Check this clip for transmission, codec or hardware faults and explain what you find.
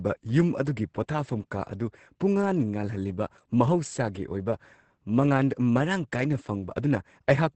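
One codec fault runs through the whole speech clip: Opus voice compression, heavily applied. The encoder was starved of bits and leaned entirely on its linear-prediction speech coder, which fits SILK running in wideband mode at roughly 10 kbps in 20 ms frames. It models the vocal tract and spends very little on the excitation signal. Nothing survives above about 8.7 kHz, so sibilants lose their edge, and the coarse excitation leaves the speech muffled, hoarse and faintly robotic from start to finish.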